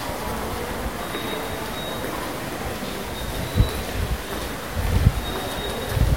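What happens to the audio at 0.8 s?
At 0.8 s you're hearing a stuck bit, and it runs through the whole clip rather than starting there. The sound has a harsh, buzzy grit layered over it, and the quieter stretches fill with noise from a bit whose step is roughly -35 dBFS. That pattern most likely comes from one data bit jammed high or low, so about half the samples get knocked off by that bit's weight as the waveform crosses it.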